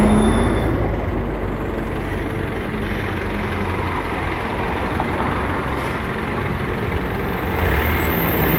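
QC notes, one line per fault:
No technical faults can be heard anywhere in this everyday-sound recording.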